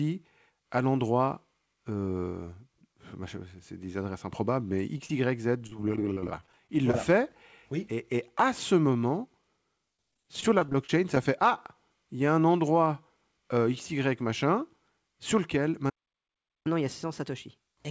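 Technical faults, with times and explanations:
4.98 s and 5.06–5.10 s, short concealed packet loss: Two bits of the call, about 10 ms and then 30 ms just after "des adresses improbables mais", arrived too late to decode. The receiver extended the preceding sound to fill each gap, leaving a brief smear or wobble.
5.58–6.94 s and 9.97–11.17 s, repeated packet loss (robotic sound): Packets kept dropping, 13 gaps in each stretch, none longer than 22 ms. About 13% and 11% of the two spans are patched by continuing the last sound, which makes the audio choppy, with fragments missing.
15.89–16.67 s, playback stall: Right after "machin sur lequel" the output goes silent for about 0.76 s. The likely cause is that the player ran out of buffered data or its thread was blocked, so the sound breaks off in mid-flow before resuming.
16.67–17.90 s, catch-up at higher speed: To work off the backlog from the stall, the player resamples to 1.15 times normal speed. 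Pitch rises with it, by roughly two semitones, so the audio sounds hurried and raised until the clip ends. The band stops at 8 kHz, which fits a G.722 call path.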